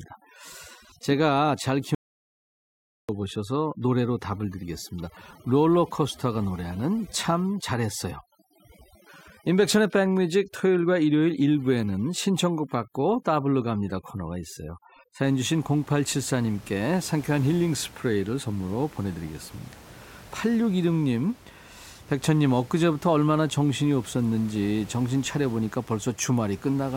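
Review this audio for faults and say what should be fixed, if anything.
From 0 to 15.2 s, overdone noise removal strips bands near the noise estimate, leaving near-silent gaps with twinkling specks. Unlike codec artefacts, the damage follows the noise floor, and the room noise, about 24 dB below speech, needed only gentle reduction. Set the reduction depth lower.

From 1.95 to 3.09 s, an audio dropout to silence removes about 1.1 s of speech. The gap is silent with no room tone, which separates it from aggressive gating. The input was likely lost briefly. Secure cables and monitor input levels while recording.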